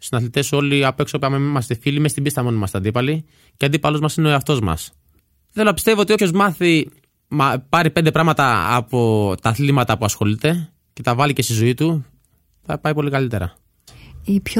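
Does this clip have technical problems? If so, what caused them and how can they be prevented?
Yes. At 6.18 s, just after "να πιστεύω ότι", compressed frames are skipped: about two 23.2 ms frames, roughly 50 ms of speech, go missing, so the speech jumps ahead. On a spectrogram the harmonics jump abruptly there; the waveform shows a discontinuity. Protect files against truncation or corruption and verify decoding so damaged frames are caught and replaced.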